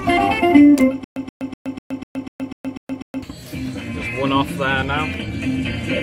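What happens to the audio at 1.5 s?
At 1.5 s the audio is caught in a stutter with silent gaps: a 126 ms burst repeats every 247 ms with 121 ms of digital silence, from 1.04 to 3.23 s. This is likely a stalled stream replaying its last fragment.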